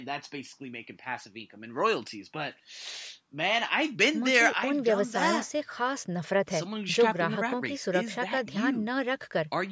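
Nothing stood out on listening to this speech, which carries the usual shaping of a call's microphone processing, with the lowest bass trimmed and no content above 8 kHz.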